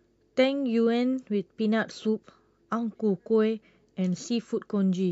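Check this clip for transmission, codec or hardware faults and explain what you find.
Nothing in this speech recording stands out as a fault, so there's nothing to flag.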